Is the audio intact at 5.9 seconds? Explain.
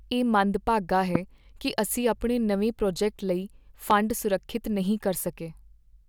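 Yes, the audio is intact at 5.9 seconds, with no fault audible at that moment.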